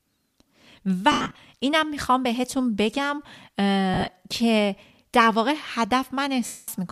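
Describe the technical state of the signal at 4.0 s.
Lost LE Audio frames, 3.94 to 4.10 s: about 100 ms of audio goes missing in short gaps spread over 160 ms, the longest lasting a few tens of milliseconds. The decoder repeats the last spectrum with random signs, so the speech turns briefly into a noisy smear.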